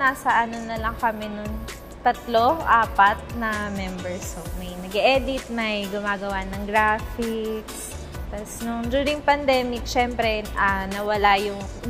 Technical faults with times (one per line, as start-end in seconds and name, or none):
none